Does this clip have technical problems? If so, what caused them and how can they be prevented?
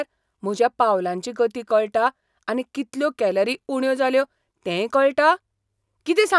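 No, the speech signal holds steady throughout with no audible technical faults, so there is nothing here to prevent.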